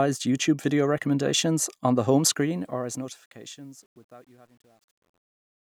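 Truncation distortion on a fade runs from 2.27 s to the end at 5.68 s, starting just after "recommendations on the home". In the fade-out, the level stage drops low-order bits without dither, which fits a 10-bit path. As the speech sinks toward the smallest step, the waveform collapses into coarse square steps. From 3.26 s onward it is at its worst and turns gritty.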